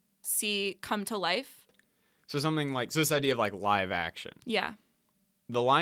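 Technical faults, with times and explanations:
3.13 to 3.31 s, lost packet rebuilt from error correction: after "something like so this" and before "of like live action", the speech turns briefly rough and grainy with no dropout or silence. Several packets, likely about five judging by the length of the damage, went missing. The decoder filled the hole with the low-bitrate backup copy that each following packet carries under Opus in-band forward error correction, so about 100 ms plays back coarser and noisier than the audio around it.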